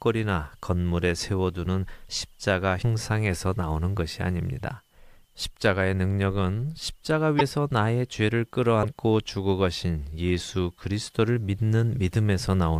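At 2.81 to 2.84 s, 7.38 to 7.41 s and 8.82 to 8.85 s the speech jumps ahead and the next stretch comes out as a chirp, a burst of noise or a short hole for about 30 ms, roughly one 26.1 ms MP3 frame. The likely cause is a broken MP3 bit reservoir: frames were lost and the following frame decoded from borrowed bytes that now belong to another frame. A plain dropout would leave a clean gap. Here the sound skips forward and the frames after the cut are damaged.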